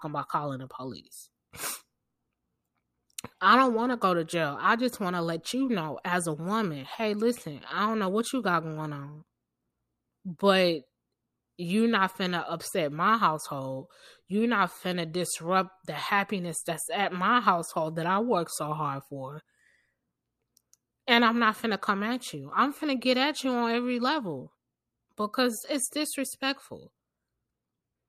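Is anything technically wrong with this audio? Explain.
No, nothing technically wrong can be heard here.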